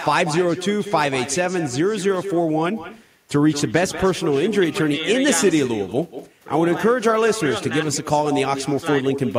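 From the start to the end of the clip, every phrase of speech is followed by a fainter copy of itself. This is echo with no canceller. The far end is playing the call through a loudspeaker. Its microphone picks that sound up and sends it back, and nothing strips it out. The copy arrives about a fifth of a second late, at about 11 dB below the direct speech. It sounds thin, like a shadow trailing each syllable.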